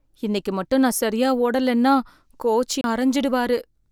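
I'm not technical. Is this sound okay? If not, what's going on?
No. At 2.81 to 2.84 s, right after "நான் சரியா ஓடலைன்னா கோச்", there's a CD skip: a tiny tick and brief silence, then the speech resumes from a different spot rather than where it stopped.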